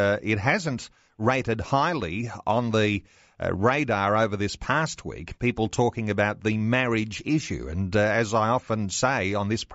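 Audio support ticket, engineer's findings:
Nothing stood out on listening to the speech audio; no findings to log against this ticket.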